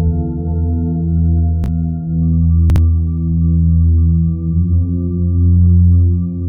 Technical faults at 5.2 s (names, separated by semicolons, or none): none